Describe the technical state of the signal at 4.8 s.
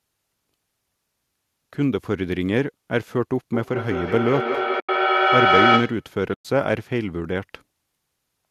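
At 4.8 s two faults overlap. The signal sits inside a feedback echo between two devices that runs from 3.54 to 6.1 s. A second device in the room replays this microphone's signal, the microphone picks it up again, and neither echo canceller removes the other's playback. The sound returns roughly every fifth of a second, each pass thinner and more ringing. The loop peaks at about 3 dB above the direct speech, so the repeats stack up rather than decay.

Within that stretch there is AAC frame loss with muting from 4.80 to 4.89 s, a gap of 90 ms. The decoder zeroed the missing frames' spectra, and the overlapping windows fade the sound out and back in, leaving a soft-edged hole. The gap's length fits a run of the short frames that the low-delay AAC path likely uses.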